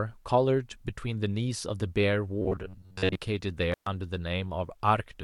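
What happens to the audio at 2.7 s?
From 2.42 to 3.16 s the speech turns into a rigid, metallic buzz near 94 Hz: robotic sound from repeated short buffers, likely from audio arriving too seldom so roughly 11 ms chunks are looped in its place for most of that stretch. A spectrogram shows flat, evenly spaced harmonic lines, and the waveform shows identical cycles repeating.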